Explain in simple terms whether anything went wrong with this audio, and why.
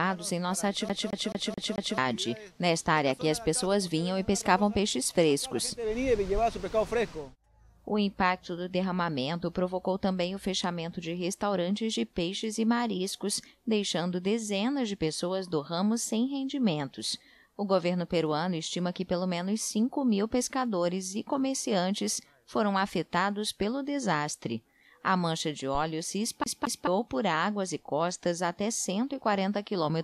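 The CD got stuck on one turn at 0.89–1.98 s and 26.44–26.87 s: a scratch kept throwing the laser back, replaying the same 0.22 s snippet in a quick stutter.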